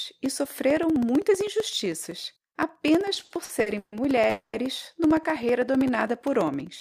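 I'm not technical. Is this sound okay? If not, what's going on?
No. Three separate problems can be heard in this speech clip.

Periodic USB or driver dropouts: from about 0.06 s to the end, something on the computer interrupts the audio connection every 0.064 seconds, and a tiny slice of sound is replaced by silence each time. You hear this as a steady ticking running under the voice.

Repeated stalls (stutter): between 3.09 and 3.94 s, the audio arrived too slowly over the network, and playback had to pause and stretch the last bit of sound eight times. The longest stall is 140 ms. Nothing is lost, but the speech drags and stutters there.

Call audio freeze: from 4.30 to 4.55 s, the audio was likely held up somewhere along the network path, so the receiver kept stretching the last sound. That stretched sound fades and briefly drops to silence for about 20 ms. The speech then picks up exactly where it stopped, roughly a quarter of a second late, with nothing missing.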